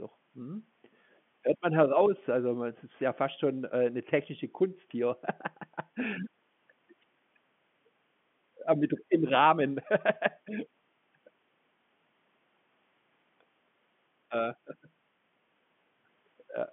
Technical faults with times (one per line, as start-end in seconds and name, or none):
none